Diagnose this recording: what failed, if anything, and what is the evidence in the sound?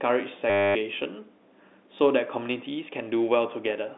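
From 0.50 to 0.75 s the speech turns into a short robotic stutter with a buzz near 100 Hz. This is packet loss with the last packet repeated. Over 250 ms, 25 packets were lost and the last one replayed, which fits 10 ms packets. The stage is the network, feeding the G.711 telephone coding path, whose 200 Hz to 3.7 kHz band is heard around it.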